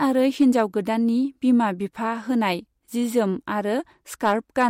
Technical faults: hard clipping

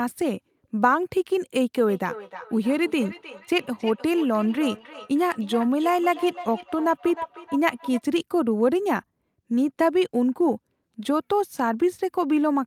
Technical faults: feedback echo between two devices

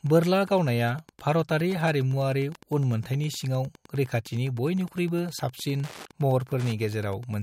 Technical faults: Wi-Fi interference

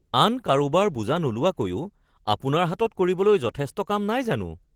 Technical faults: Opus voice compression

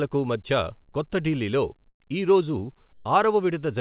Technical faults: comfort noise in place of the background

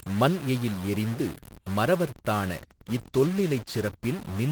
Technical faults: stuck bit; call bitrate drop

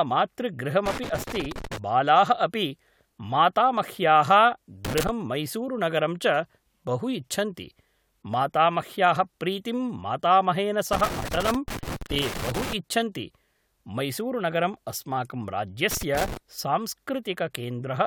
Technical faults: loose connector crackle

